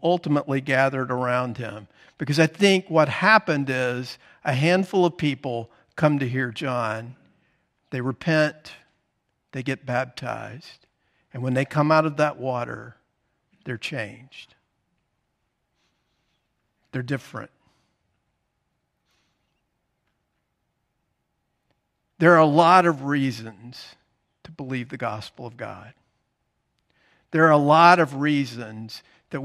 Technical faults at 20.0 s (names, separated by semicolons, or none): none